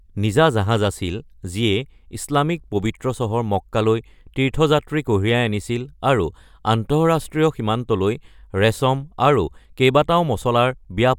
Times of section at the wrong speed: none

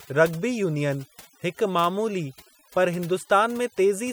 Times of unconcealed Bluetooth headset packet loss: none

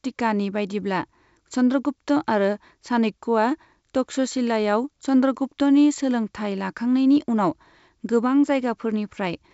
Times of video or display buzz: none

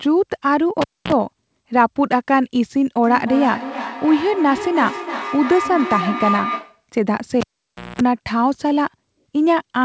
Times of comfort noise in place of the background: none

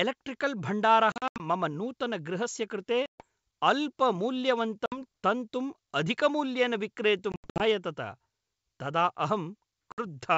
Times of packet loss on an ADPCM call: 1.12-1.43, 3.06-3.25, 4.86-5.01, 7.32-7.64, 9.92-10.04

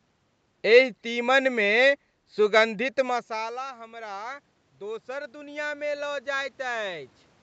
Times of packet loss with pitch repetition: none

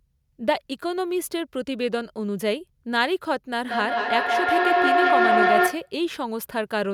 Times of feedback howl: 3.62-5.97

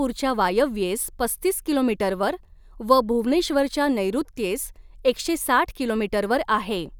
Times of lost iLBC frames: none

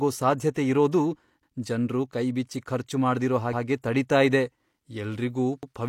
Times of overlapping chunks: 5.63-5.73

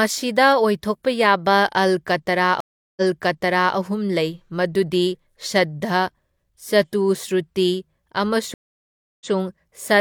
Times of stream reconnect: 2.60-3.76, 8.54-9.30

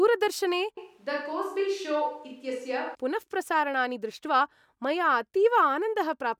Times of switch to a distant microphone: 0.78-2.95

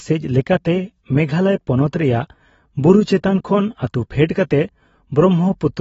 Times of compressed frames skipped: none

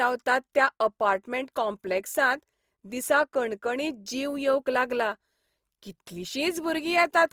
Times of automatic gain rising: none

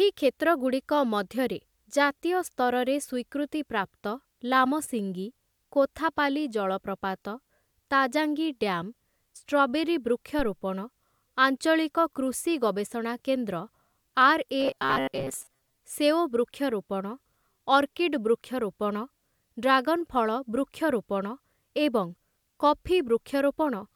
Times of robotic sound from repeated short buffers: 14.60-15.79

